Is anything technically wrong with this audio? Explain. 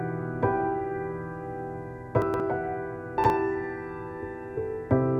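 Yes. There are chunks out of order at 2.22–2.4 s and 3.18–3.3 s. A 60 ms block plays two chunks late and then one chunk late, so the sound jumbles with three hard joins at each spot. Unlike a dropout, no audio goes missing.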